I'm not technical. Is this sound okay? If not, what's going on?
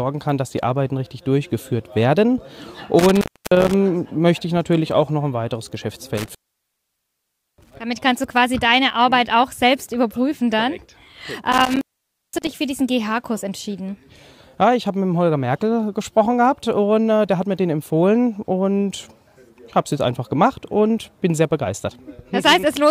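No. Intermittent contact at 2.99–3.74 s, 6.17–7.76 s and 11.52–12.60 s: a loose cable or plug briefly loses its connection, so the sound drops out for about 0.3, 1.2 and 0.5 seconds, with crackle at the edges and faint hiss in between.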